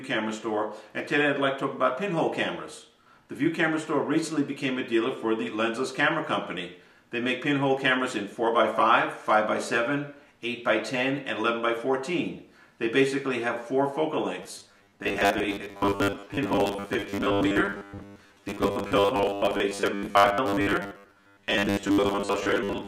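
From 14.43 s to 22.87 s, the audio turns robotic. A rigid, metallic buzz at 100 Hz sits over the sound and follows it only roughly. This is robotic sound from repeated short buffers. The likely cause is new audio arriving too seldom. The playback then fills each gap by replaying the last 10 ms. Roughly half the material is repeated this way, and the real audio in those gaps is lost.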